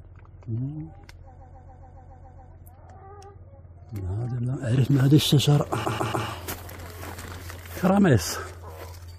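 Repeated frames stutter from 1.38 to 2.50 s, then from 5.84 to 6.26 s. The same 139.3 ms block of compressed audio replays eight times, then three. The repeats add 1.11 s and 0.42 s.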